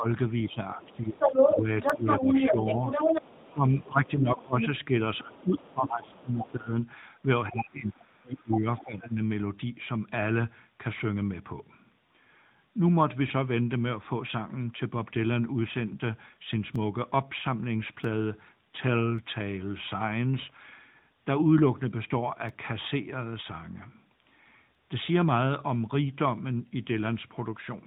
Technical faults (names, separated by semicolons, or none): AMR narrowband mobile codec; speech suppressed in double talk; dropped samples; other side's voice leaking through